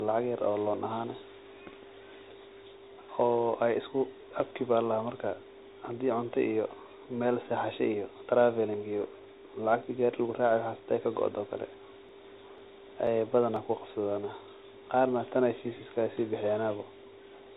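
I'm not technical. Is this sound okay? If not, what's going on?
No. The speech passes through a Bluetooth CVSD headset codec, which cuts everything above 3.8 kHz and adds a gritty, scratchy edge and grainy hiss. From 12.09 to 13.56 s, periodic USB or driver dropouts skip a few milliseconds of sound about every 0.5 s, giving roughly four evenly spaced ticks.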